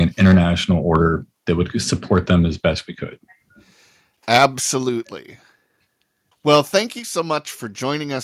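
Microphone overload appears four times: 0.21 to 0.38 s, just before "order that would"; 2.12 to 2.35 s, between "order that would" and "as best we could"; 4.32 to 4.46 s; and 6.53 to 6.77 s. The voice peaks were likely pushed past the converter's ceiling by too much input gain, overshooting by about 4, 1, 9 and 3 dB. The flattened tops add a harsh crackle. The first burst has the largest share of clipped samples, about 15 percent.

Microphone volume stepped down at 6.99 s, shortly after the last distorted peak. The call software likely reacted to the overload by cutting the device's input gain in a single jump of about 5 dB. Voice and background drop together, and the level sounds abruptly lower from that point.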